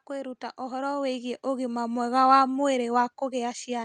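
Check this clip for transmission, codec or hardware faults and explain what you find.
One fault is present: automatic gain rising. From 0.07 s to 2.33 s the level climbs by about 10 dB as the automatic gain control, judging the input too quiet, steadily raises its gain. Speech and background noise swell together, with no sharp step. The call path's Opus coding also adds its usual coding noise, with content above 12 kHz cut off.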